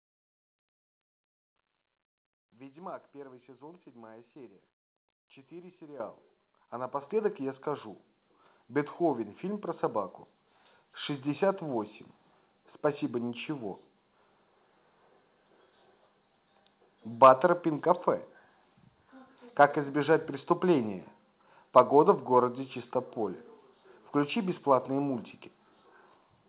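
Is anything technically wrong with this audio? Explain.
Yes. The microphone volume stepped up at 6.0, 7.02, 8.04 and 10.2 s, by about 10, 4, 2 and 2 dB. The input gain was raised in discrete steps, so voice and background noise jump together and stay louder. A compressor would pump back down afterward. Beneath this, the telephone-band sound with nothing above 4 kHz fits a G.711 mu-law call path.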